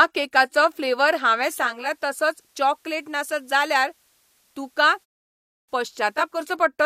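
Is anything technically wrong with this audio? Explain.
Yes. From 1.47 s, just after "केकाचो फ्लेवर हांवें", to 6.55 s, there is a digital radio blend to analogue: the receiver cross-fades over about half a second to the FM broadcast. Level drops about 3 dB, and faint hiss appears. Unlike a codec dropout, the sound continues unbroken.

At 5.30 s there is a clipped start after a pause. After a 0.33 s silence the sleeping output device wakes late and swallows about 385 ms, so the sound begins abruptly. Muted pauses lose nothing, but here sound is missing.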